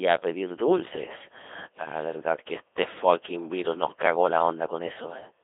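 The speech has passed through a Codec 2 vocoder at a very low rate, which fits roughly 2.4 kbit/s, throughout. Only pitch, voicing and spectral shape survive, so the voice is rebuilt from sine waves, heavily robotic and buzzy, confined to about 300 Hz to 3.6 kHz, with nothing above 3.8 kHz.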